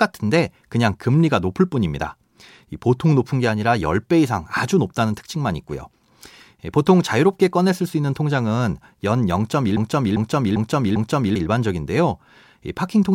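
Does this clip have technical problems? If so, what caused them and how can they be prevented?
Yes. From 9.77 to 11.36 s a broken-record loop repeats one 0.40 s fragment four times back to back, replacing the audio that belonged there, likely because the stream stalled. A spectrogram shows identical blocks tiling at 0.4 s intervals. Larger buffers with stall detection prevent it.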